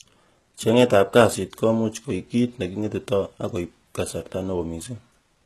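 The speech was likely squeezed through HE-AAC compression at a very low rate, consistent with around 16 kbps, which rebuilds the treble from copied lower bands. Throughout, sibilants sound gritty and metallic, the damage is plainly audible, and nothing reaches above 12.4 kHz.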